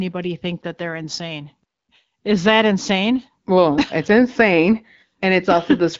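Speech carried over an AMR wideband (HD Voice) link at 12.65 kbit/s, with only light coding texture and nothing above 7.6 kHz, as the wideband channel dictates; no faults found.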